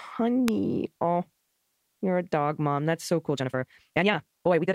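At 0.48 s a single sharp snap sits on top of the speech, likely an electrical switching spike picked up from a nearby arc rather than a dropout in the signal. From 3.25 s to the end, the pace abruptly doubles at unchanged pitch, a rushed time-stretched section, likely software compression, unlike sped-up playback, which would raise the pitch.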